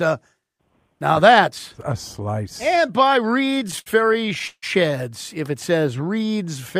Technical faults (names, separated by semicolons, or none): repeated stalls (stutter); jitter buffer slow-down